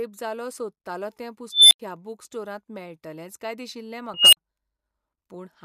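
At 1.52 s, right after "जालो सोदतालों तें", a high squeal near 4 kHz swells for 195 ms until it clips, then the audio drops out for 85 ms before "ह्या बूक स्टोरांत मेळटलेंच". At 4.14 s, after "स्टोरांत मेळटलेंच काय दिशिल्लें", a tone near 3 kHz builds over 188 ms, clips, and goes silent for 43 ms. Both are an unstable filter: a recursive filter with bad coefficients feeds back until its output overflows, mutes, and resets.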